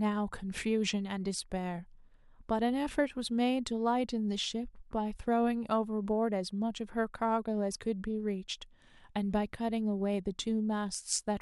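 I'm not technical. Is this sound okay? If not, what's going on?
Yes, nothing in this recording points to a technical problem with how the sound was captured or delivered.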